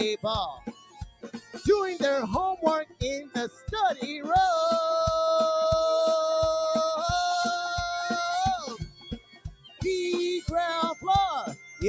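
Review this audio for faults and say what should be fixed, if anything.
A speech-tuned noise suppressor has been left running on this sound throughout, treating sustained tones, ambience and decays as noise. Its gain pumps by around 10 dB, so the audio flutters and thins. On a waveform, the envelope breathes irregularly. On a spectrogram, sustained bands flicker in level.

Sound is cut by the noise suppressor at 0.53–1.66 s (about 18 dB down), 2.85–3.01 s (about 19 dB), 3.22–3.7 s (about 13 dB), 8.57–9.84 s (about 19 dB) and 11.55–11.82 s (about 9 dB). Held material and tails sink while onsets survive. These spans show as sudden dark gaps in the spectrogram and shrunken waveform sections.

The empty region above 8 kHz reflects the call's band limit rather than a fault.

To prevent this, disable noise suppression, or switch the call to a music or original-sound mode, before capturing anything other than speech.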